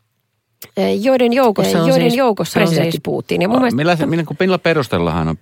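A second capture path or an out-of-step edit has likely mixed the speech in twice, producing a doubled audio track from 1.43 to 2.97 s. An equally loud, dry copy trails about 0.7 s behind, overlapping the original and starting and stopping abruptly.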